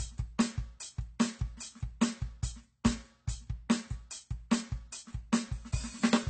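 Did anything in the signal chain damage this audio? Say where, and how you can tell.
Yes, at the codec stage, as AAC compression running through the whole clip. The music has nothing above 8.5 kHz, and the remaining spectrum sounds smeared, with a warbling, fizzy texture on sustained material. That points to the likely cause, a lossy encoder starving its quantiser, consistent with AAC-LC at about 24 kbps. A plain low-pass filter or resampling would dull the top just as cleanly, but it would not add the shifting, bubbly artefacts below the cut-off.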